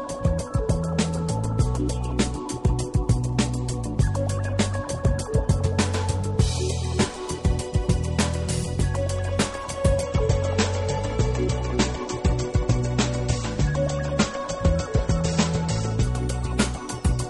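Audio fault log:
10.03–16.03 s adaptive stream at a lower bitrate: playback switched suddenly, with no gap, to a leaner encode consistent with 32 kbit/s MP3, removing everything above 8.4 kHz.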